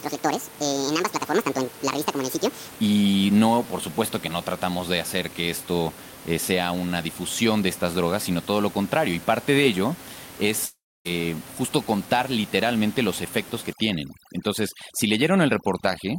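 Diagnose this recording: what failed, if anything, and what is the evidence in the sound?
The section at the wrong speed, likely from a playback clock mismatch, runs 0 to 2.71 s at 1.71 times normal speed, so the speech sounds hurried and around ten semitones high.

A long network dropout, likely from lost packets, empties 10.65 to 11.07 s. Concealment stretches the last sound into a fading buzz, then about 260 ms of near silence, and 400 ms of speech is gone.

Overdone noise removal in call processing clamps frequency bands near the noise estimate from 13.73 s to the end, taking quiet parts of the voice with them and leaving a near-silent background with twinkling specks.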